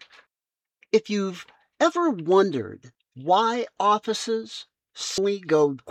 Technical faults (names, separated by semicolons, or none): compressed frames skipped